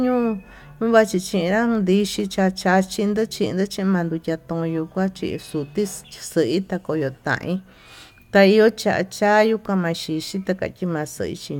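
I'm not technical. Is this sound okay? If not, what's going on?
Yes, this speech sounds fine, with nothing going wrong that you'd need to worry about.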